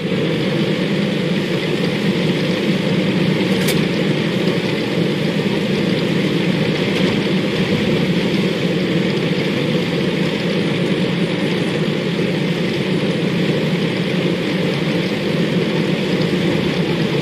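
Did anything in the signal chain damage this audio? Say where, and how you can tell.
No, nothing in the signal chain damaged this audio.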